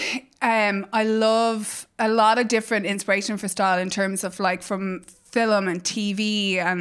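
No technical faults can be heard anywhere in this recording of speech.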